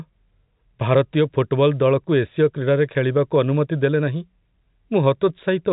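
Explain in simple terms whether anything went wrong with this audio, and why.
Nothing went wrong; this telephone-quality speech has no faults.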